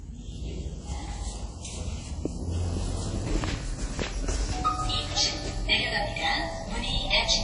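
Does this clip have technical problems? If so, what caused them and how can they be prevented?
Yes. Low-bitrate audio saved at a high bitrate runs throughout the clip. Nothing is present above about 10.1 kHz, and the top end has the thin, smeared quality of heavy lossy coding. This likely comes from a low-bitrate encode, consistent with something like 32 kbit/s WMA, later re-saved as a much higher-bitrate MP3. The larger file cannot restore the detail the first codec discarded, so its cut-off and artefacts remain. To prevent this, keep and export from the original uncompressed or high-quality source rather than re-encoding a low-bitrate copy.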